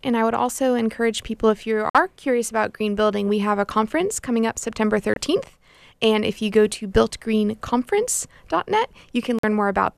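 A speech clip with three short digital broadcast dropouts: the receiver goes silent from 1.90 to 1.95 s, between "encourage people if you" and "curious about green building", from 5.14 to 5.17 s, and from 9.39 to 9.44 s. Each hole cuts out or quickly fades to silence and then jumps ahead, so the sound sent meanwhile is lost. The gaps fit one or two muted frames of about 24 ms each. Unlike a smeared or repeated concealment glitch, these holes are simply blank.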